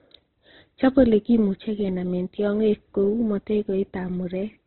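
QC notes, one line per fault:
Throughout: low-bitrate audio saved at a high bitrate. The speech stops sharply at 4.1 kHz and sounds dull. This likely comes from a very low-bitrate first encoding, later re-saved at a high bitrate. The bigger file cannot bring back the removed top band.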